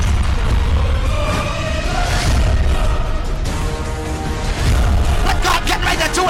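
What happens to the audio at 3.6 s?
At 3.61 s a chunk of roughly 5.3 ms, about what a 256-sample buffer at 48 kHz holds, was delivered one chunk late and played after its successor. Chunks out of order leave three hard joins, heard as a brief jumbled moment.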